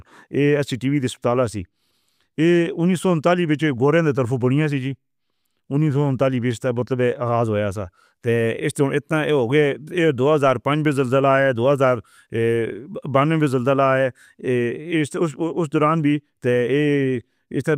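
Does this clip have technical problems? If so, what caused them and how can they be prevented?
No, the recording shows no technical fault and needs no preventive action.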